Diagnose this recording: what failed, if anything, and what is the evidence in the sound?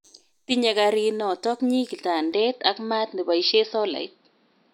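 From 2.33 s the speech dulls, losing everything above 5.6 kHz, with faint new noise. Driver stage: likely an input switched to a poorer device.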